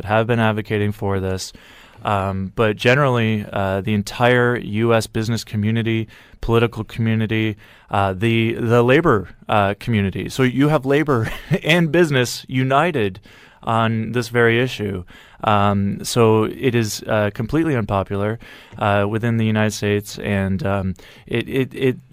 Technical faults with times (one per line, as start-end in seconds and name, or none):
10.34-11.95 crude rate conversion